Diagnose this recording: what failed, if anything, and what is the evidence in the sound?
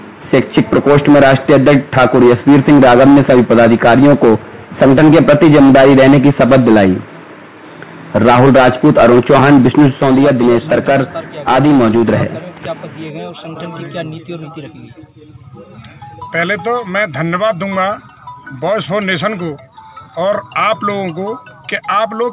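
Nothing in the recording points to a failure at any stage. It has passed through a call path, and its content stops at 4 kHz, which fits a narrowband telephone codec such as G.711 A-law at 64 kbps.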